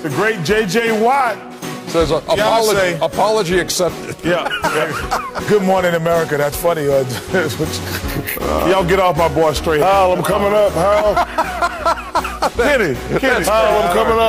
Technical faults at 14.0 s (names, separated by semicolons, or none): hard clipping